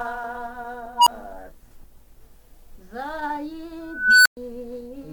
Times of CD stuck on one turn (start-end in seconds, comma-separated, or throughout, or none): none